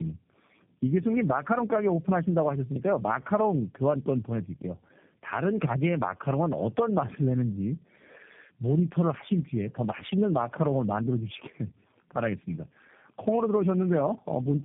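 Throughout, the speech carries tandem speech coding: it sounds rough, muffled and warbly, consistent with three narrowband codecs in a row, each re-encoding the previous one's damage. A spectrogram shows nothing above 3.7 kHz and smeared, blotchy formants.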